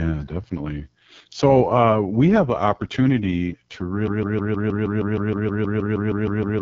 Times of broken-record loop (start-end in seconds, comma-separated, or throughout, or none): 4.07-6.62